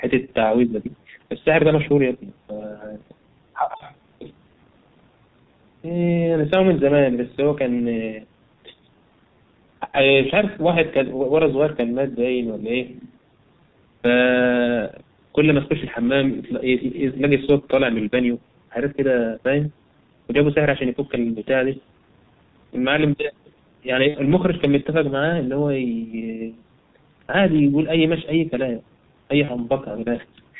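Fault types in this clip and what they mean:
G.723.1 codec: The speech is heavily muffled and hoarse throughout, with smeared consonants and nothing above 4 kHz. This points to the G.723.1 codec, an early internet-telephony coder that works in 30 ms frames at a rate fitting about 6.3 kbit/s. Its slowly updated model of the voice cannot keep pace with quick changes, so fine detail blurs.
VoIP packet loss concealed by the speech codec: Three brief spots turn the speech into a short stretched sound that fades out. They fall at 3.77 to 3.82 s, 24.08 to 24.16 s and 29.45 to 29.50 s, and the middle one is the longest. The gaps fit one, two and one lost 30 ms frames. The decoder filled each by stretching its last pitch and filter at falling gain, and because every frame builds on the previous one, the sound stays weakened briefly after packets resume.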